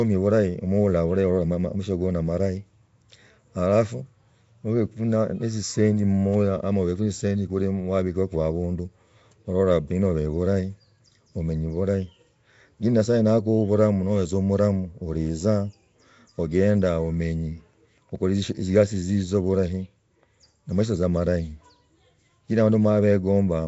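From start to finish, the speech carries a rough, hissy halo and a smeared, underwater quality. The damage is plainly audible. Nothing is heard above about 7.7 kHz. This is likely Nellymoser compression, the old Flash microphone codec. It codes short blocks of samples with very few bits. Weak bands get no bits and are filled with noise instead. That noise fill makes the hiss, and the coarse coding blurs the speech. The sound fits a bitrate near 32 kbps.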